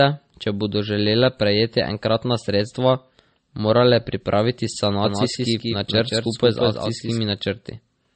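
Speech that sounds dull and smeared throughout, with nothing above 8.4 kHz and two distinct layers of compression artefacts heard together. This is likely transcoding between lossy codecs, pointing to a low-bitrate MP3 pass re-encoded as WMA 1, with the first codec's cut-off surviving the chain. From 5.04 s to 7.18 s, right after "morale pripraviti", a doubled audio track appears. A dry, full-band second copy of the speech trails roughly 200 ms behind, about 5 dB quieter, with no decay or room colour, and it begins and ends abruptly. The likely cause is the same audio being captured twice through a slower path, or an edit holding two copies out of step.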